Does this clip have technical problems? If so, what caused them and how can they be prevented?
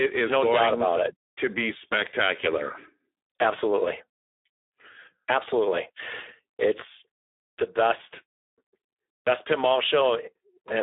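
Yes. Speex codec damage throughout: too few bits for the CELP excitation, consistent with an 8 kbps setting, leave the speech noisy and hoarse within 300 Hz to 3.6 kHz. Prevent it by raising the Speex quality setting or switching to a wideband codec such as Opus.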